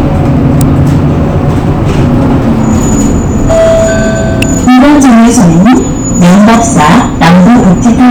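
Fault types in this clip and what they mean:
Electrical switching spike: two sharp snaps sit on top of the sound, at 0.61 s and 4.42 s, each lasting only a few milliseconds. The likely cause is a nearby switch, motor or static discharge arcing, with the audio line picking it up. On the waveform each snap is a narrow spike jutting out from the surrounding signal. On a spectrogram it shows as a thin vertical stripe running across the whole frequency range.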